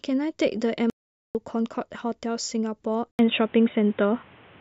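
It's a speech clip with two problems. First, an audio dropout to silence from 0.90 to 1.35 s: about 450 ms of dead silence with no room tone at all, so the input was likely lost briefly while recording carried on. Then at 3.11 s there's an 80 ms gap and the sound goes dull and boxy through to the end, with nothing above 3.8 kHz, a few dB change in level and new background noise roughly 30 dB down, pointing to the input likely being switched to a poorer device, such as a headset on its call profile.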